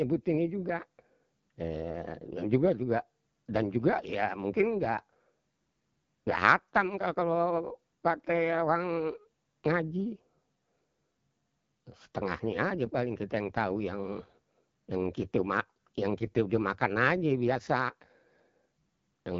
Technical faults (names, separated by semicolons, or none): AMR wideband (HD Voice) codec